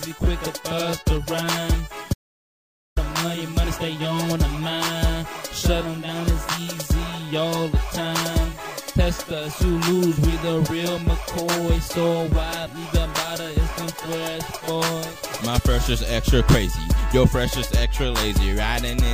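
From 2.14 to 2.97 s an audio dropout to silence leaves 0.83 s of dead silence, likely a lost input, with no room tone, unlike a natural pause.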